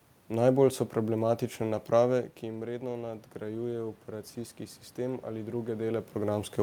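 Automatic gain rising affects this speech clip: from 2.4 to 4.39 s the gain control adds about 4 dB, so voice and room noise swell together.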